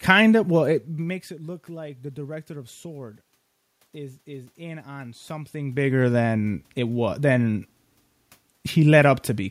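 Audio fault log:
Nothing stood out on listening to the speech; the steady room background and the level shifts near 0.5 s and 5.5 s, where the talker moves relative to the microphone, belong to the recording itself.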